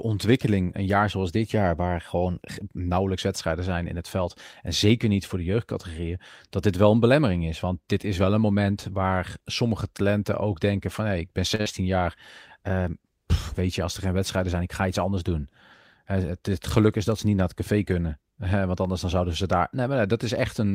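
It's a speech clip with two network glitches back to back around 11.6 s. First, at 11.55 to 11.61 s, there's a short stall from a late packet: the jitter buffer ran dry, so the receiver held the last sound for about 37 ms, then picked up where it left off. Nothing's lost, but playback now sits roughly 37 ms later. Right after, from 11.61 to 11.68 s, a burst of packet loss hits: about 45 ms of concealment fades out, and about 40 ms of actual audio is skipped.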